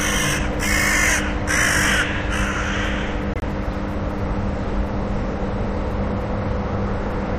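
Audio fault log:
3.34–3.42 s, corrupt frame muted: an abrupt 86 ms hole of silence cuts into the sounds. Damaged compressed frames were rejected by the decoder and replaced with silence; the gap's length points to several consecutive frames, and timing resumes unshifted afterward.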